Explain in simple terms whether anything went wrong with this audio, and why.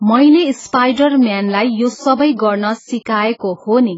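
The speech sounds dull and smeared from start to finish. Nothing is heard above about 7.6 kHz, and the hiss of s sounds turns fizzy. This is likely heavy AAC compression, which discards fine detail to save space and leaves gaps in the sound.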